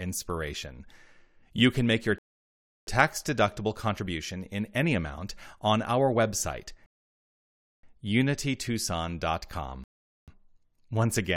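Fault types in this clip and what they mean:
Rebuffering stall: the player ran dry of downloaded audio and sat waiting for more, so the speech drops to dead silence, then carries on from exactly where it paused. Nothing goes missing, it just stretches out, here by about 0.69 s, 0.97 s and 0.44 s.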